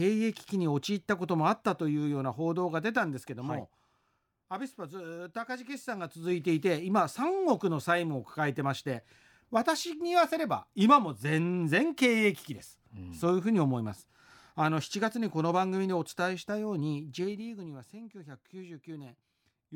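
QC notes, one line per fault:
17.07–17.84 s, zipper noise: a gain reduction of roughly 15 dB was applied in 2 dB steps, around ten per second, with no smoothing between them, so the level drops in a staircase rather than a slope. Each jump leaves a tiny discontinuity in the speech waveform, and together they form a ticking, zipping texture that rides on the sound only while the level is moving.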